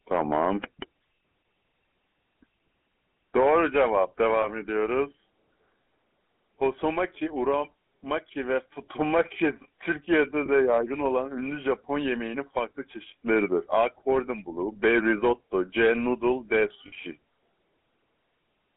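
GSM full-rate codec coding runs through the whole clip. The speech is squeezed into a band of roughly 200 Hz to 3.5 kHz, and the regular-pulse excitation leaves a plainly audible buzzy, gravelly roughness, consistent with the 13 kbps full-rate codec.

Lost GSM frames occur at 4.42 to 4.47 s, 10.46 to 10.49 s and 16.88 to 16.93 s. In each gap the decoder repeats the last good frame's settings, so the sound briefly smears into a rough, metallic ring. The first two fit one 20 ms frame lost and the third fits two.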